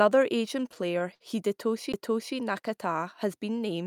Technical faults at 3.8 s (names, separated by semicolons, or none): none